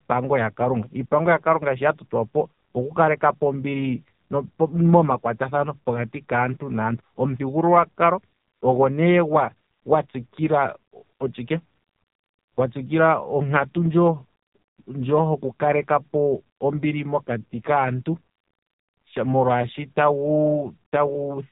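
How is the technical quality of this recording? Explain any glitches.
The quality is poor throughout because the whole recording has passed through the AMR narrowband mobile codec. The codec models speech as a vocal-tract filter excited by sparse pulses, with nothing kept above about 3.8 kHz, so the speech sounds muffled and phone-like. The heavy buzzy, synthetic colouring fits a low-rate mode around 5.9 kbps.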